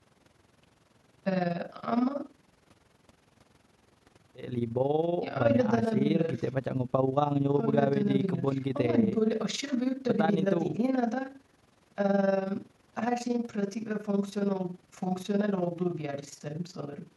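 Throughout, the speech has a fast, rough flutter, a robotic tremolo pulsing roughly twenty times a second with level swings of about 11 dB. This is overlap-add ripple: windowed frames were rejoined with overlaps that don't sum to constant gain, so loudness dips every frame.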